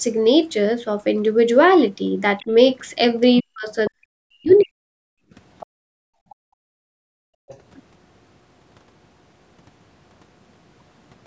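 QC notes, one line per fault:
2.38 to 7.58 s, other side's voice leaking through: the echo canceller likely failed to fully remove the loudspeaker signal from the microphone, so faint scraps of a second voice slip into the send path at 2.38 to 2.46, 3.85 to 3.90, 4.57 to 4.61, 5.60 to 5.66, 6.30 to 6.35 and 7.48 to 7.58 s. Each lasts a tenth of a second or less and sits roughly 25 to 35 dB below the talker.
3.4 to 4.77 s, speech suppressed in double talk: with both ends talking at once, the canceller likely could not tell the local talker from the loudspeaker echo and pulled the whole microphone signal down. The talker's voice dips and breaks up in pieces across this span, by around 40 dB at its deepest, with about a second of the stretch affected in total. Two of the leak fragments fall inside it.
5.05 to 7.48 s, background gated by the echo canceller: while the loudspeaker was active, the canceller clamped the microphone gain hard, taking the room sound down by about 36 dB at its lowest. 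The ambience drops away for roughly two seconds in all across this span, then returns as the canceller releases around 7.48 s, just as another echo fragment comes through.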